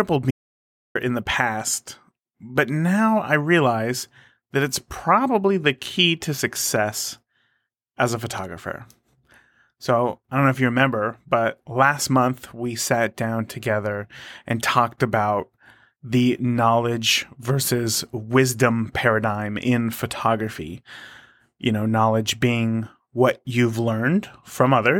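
Speech, and right near the start there's an audio dropout to silence: from about 0.31 s to 0.95 s the sound cuts out completely, roughly 640 ms of silence with no room tone underneath, then picks back up mid-flow at "in the past but". Whatever was said in that gap is simply gone. It's most likely the input dropping for a moment, say a loose connection, a link hiccup or a brief accidental mute, while the recorder kept writing silence.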